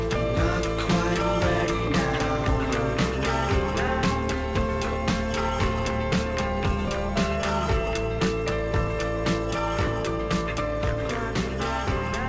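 The clip is audio carried over a WebRTC call path, with content above 8 kHz absent, and nothing is technically wrong with it.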